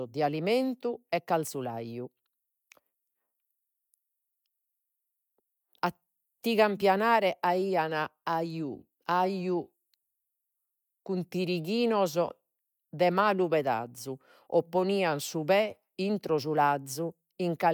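No technical faults can be heard in this recording.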